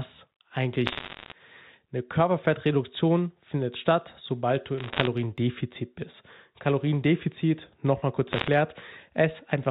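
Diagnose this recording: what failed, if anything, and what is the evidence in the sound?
Bit errors on a digital phone line, at the transmission stage. Crackle bursts run from 0.86 to 1.32 s, 4.78 to 5.07 s and 8.32 to 8.48 s. Flipped bits in the mu-law stream corrupt single samples into sharp ticks. The speech underneath stays intact.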